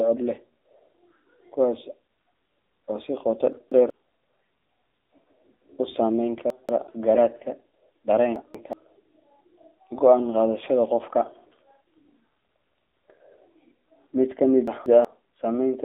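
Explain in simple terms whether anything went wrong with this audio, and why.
AMR narrowband mobile codec, throughout: the speech went through the old 2G/3G phone codec. It keeps only about 300 Hz to 3.7 kHz and rebuilds the voice from a simple model, so it sounds muffled, buzzy and somewhat synthetic.

Chunks out of order, at 3.53–3.90, 6.50–6.87, 8.36–8.73 and 14.68–15.05 s: each time, a piece of audio about 0.19 s long played one slot late, after the piece that should follow it. The speech briefly jumbles.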